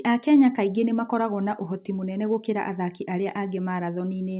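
No faults are audible; the speech arrives over a call path band-limited to 4 kHz, consistent with G.711 A-law telephone coding.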